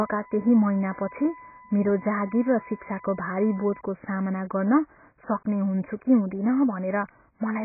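AAC compression runs through the whole clip: the speech is heavily damaged and dull, with nothing above 2.5 kHz. This likely comes from AAC-LC coding at a very low bitrate, around 12 kbps, where the encoder lowers its cut-off and spends its few bits coarsely.

USB whine sits under the speech from 0.0 to 3.81 s as a fixed 1 kHz tone, roughly 20 dB below the speech. The bus draws current in 1 ms frames, and that 1 kHz pulse leaks into the audio through the power or ground.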